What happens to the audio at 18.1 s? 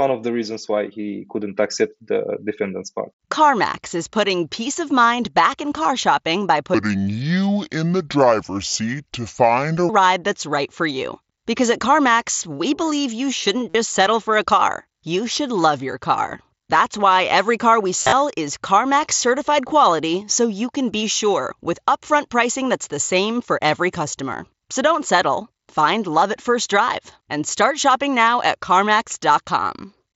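Right after "why every car we", concealed Bluetooth headset packet loss hits from 18.00 to 18.13 s. About 98 ms of audio drops out across 120 ms. The receiver patches each gap by repeating recent waveform. The longest run, 37.5 ms, gives a brief buzzy tone and a small warble.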